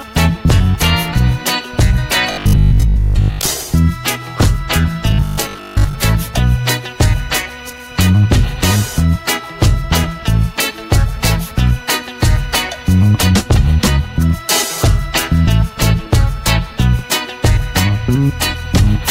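From 2.32 to 3.50 s and again from 5.11 to 5.95 s, the sound turns into a rigid, metallic buzz at 50 Hz. This is robotic sound from repeated short buffers, likely caused by roughly 20 ms chunks looping for most of each stretch.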